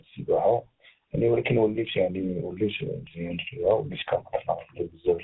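Speech, carried over a call path that has passed through tandem speech coding from start to finish. The band stops at about 3.8 kHz, and the voice has the layered roughness, muffling and warble of two speech coders in a row. The character fits a GSM full-rate stage followed, after a G.711 A-law hop, by G.726 re-encoding, with the second coder working on the first's already damaged output. At the low end, the lowest bass is missing, which is normal high-pass filtering in the call microphone processing.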